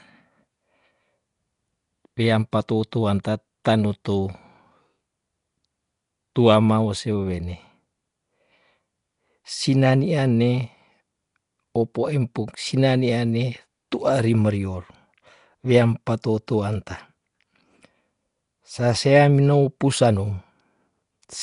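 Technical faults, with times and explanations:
Throughout: Nellymoser compression is the likely cause of the rough, hissy halo and underwater smear, with nothing above 10.6 kHz. Unlike MP3 swirl, weak bands become steady noise fill, which fits a bitrate near 44 kbps.
3.24 s: pre-echo, a brief hiss of about 11 ms just before an attack, between "weam patou" and "tanu tou". Block-wide quantisation noise arrives ahead of the onset, whereas reverb or echo would trail after it.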